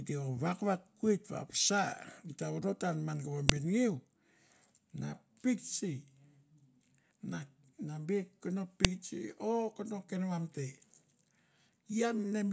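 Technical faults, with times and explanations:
3.49 s and 8.85 s: file header played as audio. Two sharp, loud clicks cut through the speech, each lasting only a couple of milliseconds. They mark points where separate pieces of the recording were joined or streamed one after another. The header bytes at the start of each piece were never stripped. Those few dozen bytes were decoded as samples, producing an abrupt burst. It snaps regardless of what the speech is doing at that instant.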